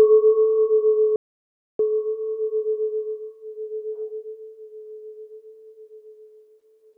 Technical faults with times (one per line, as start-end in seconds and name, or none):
1.16-1.79 playback stall